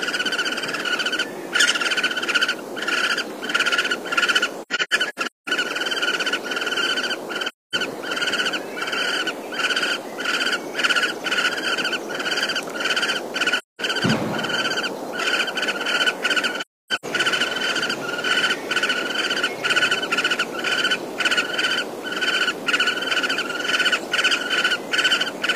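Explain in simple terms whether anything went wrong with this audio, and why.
AAC frame loss with muting at 4.62–5.50 s, 7.48–7.75 s, 13.58–13.81 s and 16.61–17.05 s: chunks of compressed sound went missing and the player filled them with silence, so the audio fades out and back in, leaving soft-edged gaps, some broken into several short holes.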